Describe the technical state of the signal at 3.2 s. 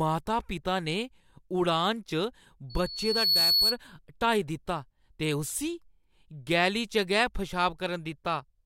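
Loudspeaker feedback squeal, 2.70 to 3.78 s: the microphone re-amplifies its own loudspeaker output, so a 4.4 kHz tone builds over about 0.7 s to roughly 5 dB above the speech.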